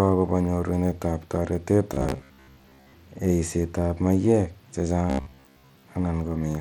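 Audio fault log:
Throughout: Bluetooth SBC compression. The speech carries plainly audible grit and quantisation noise, likely from SBC coding at a bitrate that points to about 96 kbps. Coarse sub-band bit allocation with no hearing model leaves roughness riding on the speech, though content still reaches about 20 kHz.
1.94 to 2.93 s and 5.10 to 5.83 s: robotic sound from repeated short buffers. The speech turns into a rigid, metallic buzz at about 66.7 Hz, likely because audio arrived late and a roughly 15 ms slice was replayed for most of each stretch, imposing that fixed pitch.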